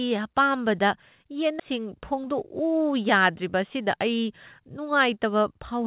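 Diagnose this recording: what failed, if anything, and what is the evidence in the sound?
CD skip at 1.6 s, a playback fault: roughly 10 ms of silence as the laser jumps tracks, then the speech resumes from another turn of the spiral.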